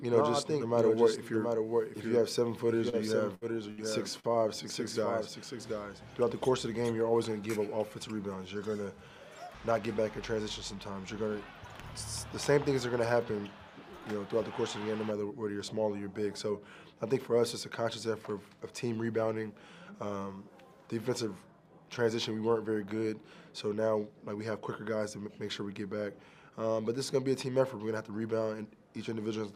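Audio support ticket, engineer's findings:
Doubled audio track, 0.00–6.92 s. A full-band copy trails the original by roughly 0.7 s, about 5 dB down, already present at the start and cutting off abruptly at 6.92 s. No decay or room colouring, so not reverb or acoustic echo. Likely cause: a second, slower capture path mixed in, or an edit left two misaligned copies. The fixed lag and clean cutoff set it apart from a feedback loop.

Short stall from a late packet, at 2.89 s and 4.20 s. The last sound is held about 33 ms and then about 44 ms, with a faint buzz or dip, and resumes from the same point. Jitter buffer ran dry and concealment bridged the gap until the packet arrived. Nothing is lost, only delay added, which separates it from packet loss.

Burst of packet loss, 3.35–3.44 s and 3.71–3.81 s. Each is a held, fading buzz or hiss of about 60–70 ms, after which playback jumps ahead with about 60 ms of content missing. 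Consecutive packets were lost or arrived too late, and the receiver extended and attenuated the last frame. The fade and the jump distinguish it from a stall.

Jitter buffer slow-down, 4.28–4.64 s. Audio drags to about 87% speed at unchanged pitch, with about 52 ms added. Receiver repeated pitch periods and pause fragments to rebuild its reserve. Pitch is unchanged, so this is not clock drift or resampling.

Jitter buffer speed-up, 9.67–9.89 s. Audio sounds hurried, running at about 113% with pitch intact, and about 40 ms is trimmed. Excess buffered audio was cut by removing short pitch-period segments in succession. The gradual compression with no hard jump separates it from loss.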